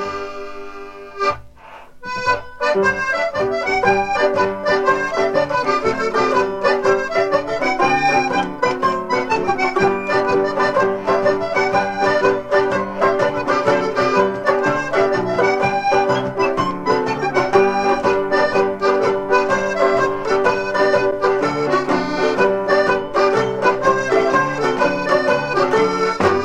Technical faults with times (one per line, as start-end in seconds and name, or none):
none